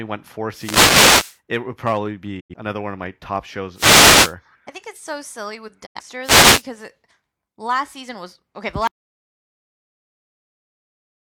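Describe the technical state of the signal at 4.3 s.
At 4.3 s the speech sits under a wireless microphone noise hit, lasting 3.74–4.35 s: the FM radio link fades, so receiver hiss swells into a static swish rather than a clean digital dropout.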